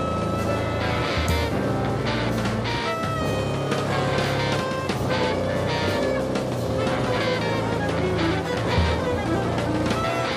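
No technical faults are audible.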